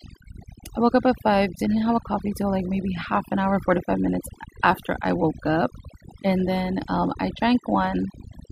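Overdone noise removal runs throughout this speech recording. The noise reduction was set too hard. It pulls individual frequency bands down or out whenever they sit near its noise estimate, so the background drops and breaks up into twinkling specks. The quieter parts of the voice are cut along with it.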